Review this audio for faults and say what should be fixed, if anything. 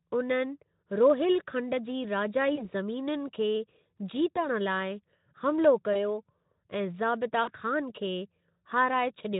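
Packets went missing on the network path four times, and the Speex decoder, running lightly at about 15 kbps, covered each gap with VoIP packet loss concealment, extrapolating from its last pitch and filter state while lowering the gain. The sound is stretched into a fading buzzy tone or coloured noise at 2.55 to 2.69 s, 4.35 to 4.47 s and 5.93 to 6.01 s, each fitting one lost 20 ms frame, and at 7.43 to 7.50 s, where about 40 ms went missing, which points to two consecutive frames. Because each decoded frame builds on the previous one, the weakened, distorted quality lingers beyond the missing 20 or 40 ms. To prevent it, reduce loss on the link and enable forward error correction or a jitter buffer deep enough to absorb late packets.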